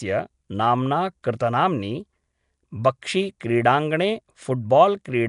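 A speech recording that carries a rough, hissy halo and a smeared, underwater character from start to finish, with nothing at all above about 10.6 kHz. The damage is plainly audible and is likely Nellymoser compression, the old Flash microphone codec. It codes short blocks of 256 samples with a fixed bit budget, so quiet bands get no bits and are replaced with noise. The plainly audible damage fits a rate of around 44 kbps. Two sharp onsets, at 3.02 s and 3.40 s, are each preceded by a brief hiss of about 10 ms and sound softened. This is pre-echo. Each attack falls late in a transform block, so the quantisation noise sized for the loud onset spreads evenly across the whole block and spills into the quiet moment just before it.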